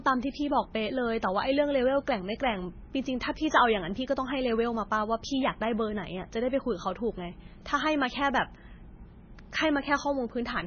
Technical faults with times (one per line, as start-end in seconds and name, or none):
0.00-10.66 MP3 compression